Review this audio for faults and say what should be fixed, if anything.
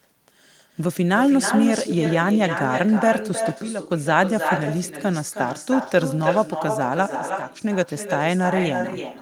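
There's echo with no canceller the whole way through. The far end's loudspeaker feeds its mic, so the speech returns about 7 dB down, around a third of a second later. Running echo cancellation at that end would stop it.

There are also two sudden gain jumps, from 3.62 to 3.90 s and from 7.15 to 7.62 s. Speech and background both abruptly drop about 11 dB, then come back, likely an unramped digital gain change. Ramping any gain change over a few milliseconds would avoid these.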